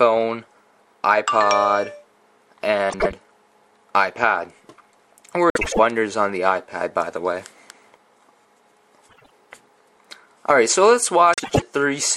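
Frames out of order at 2.89, 5.5, 9.09 and 11.33 s: two short neighbouring blocks play swapped, making a garbled flutter. Unlike a dropout, no time goes missing.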